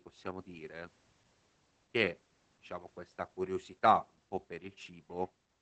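Speech runs through Opus voice compression for the whole clip. The band stops near 8 kHz. Coarse SILK coding leaves it muffled, hoarse and slightly robotic, which fits roughly 12 kbps.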